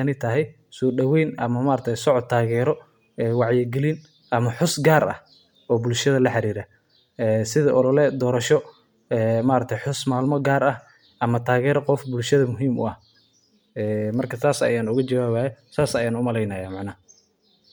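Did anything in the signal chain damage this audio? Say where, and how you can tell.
Yes. The damage is at the codec stage and runs through the whole speech clip. A breathy, grainy edge is most likely Bluetooth LC3 compression, which fits 10 ms transform frames near 48 kbps. There is nothing above about 20.2 kHz.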